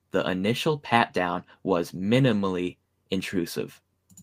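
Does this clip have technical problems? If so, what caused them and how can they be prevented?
No, nothing in this speech recording stood out as a technical problem on listening, so there is no cause to trace and nothing to prevent.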